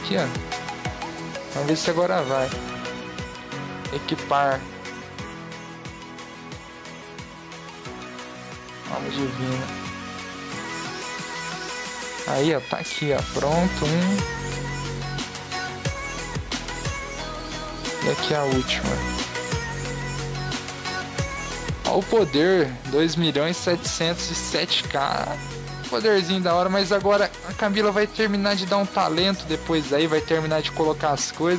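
The audio carries gain pumping throughout, with the level swinging by roughly 10 dB, leaving loud and soft passages squashed together. The likely cause is gain set far too high, forcing a fast limiter to clamp down repeatedly. The call microphone processing is audible as a bandwidth that stops at 8 kHz.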